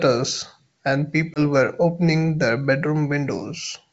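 At 1.34 s there's a packet loss on an ADPCM call: about one packet's worth, 20 ms, drops out as a hard-edged gap. The decoder's predictor and step size lose track, so the speech comes back slightly off until it settles near 1.40 s, over a G.722 wideband signal at 64 kbit/s.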